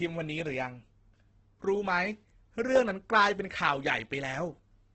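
Throughout, the speech sounds grainy, rough and noisy, with nothing above 8.2 kHz, likely from heavy Opus compression in CELT mode, consistent with roughly 12 kbps.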